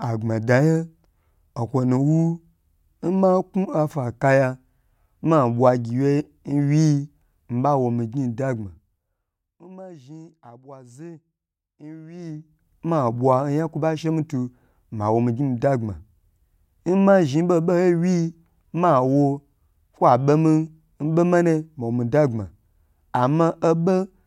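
Zipper noise at 8.49–9.67 s and 12.11–12.67 s: the speech level falls, then rises, by about 25 dB in unsmoothed 1 dB steps. That happens roughly 20 and then 40 times a second, and each step ticks audibly before "zhi abwazu" and "ma bwa oyan kwo".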